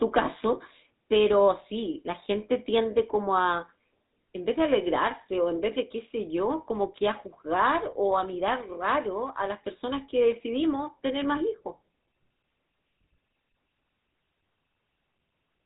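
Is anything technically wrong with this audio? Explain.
Yes. Throughout, the speech sounds plainly buzzy and gravelly with nothing above 3.8 kHz, the mark of the GSM full-rate codec, which rebuilds the voice from a vocal-tract model driven by regular pulses, fitting a 13 kbps stream.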